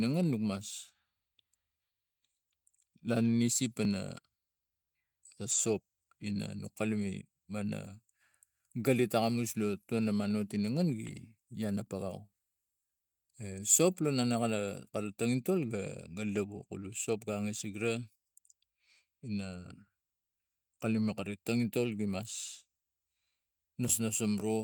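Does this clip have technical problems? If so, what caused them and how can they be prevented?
Yes. At 3.85 s, just after "lani is", there is a brief click where about 6.5 ms of sound plays twice. These are overlapping chunks: the audio was handled in 4.0 s blocks, and this block began slightly before the previous one ended, duplicating the seam. Aligning chunk boundaries exactly, or crossfading and trimming any overlap, prevents it.

Short rough, noisier patches occur at 5.51 to 5.57 s, 8.79 to 8.81 s, 11.03 to 11.09 s and 16.35 to 16.37 s, lasting 40, 20, 40 and 20 ms, which fits two, one, two and one lost 20 ms packets. Each is a lost packet rebuilt from error correction: the decoder filled the gap with a low-bitrate copy carried in the following packet, avoiding silence at the cost of quality. A more stable network path or added redundancy prevents it.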